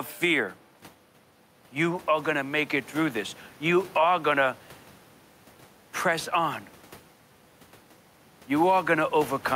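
Gain pumping runs through the whole speech recording: the gain swings by roughly 5 dB, pulled down under every loud syllable, while the room noise sits about 31 dB below the voice. This likely comes from input gain set far too high, with a fast limiter clamping each peak. Unlike a noise gate, the background never cuts out.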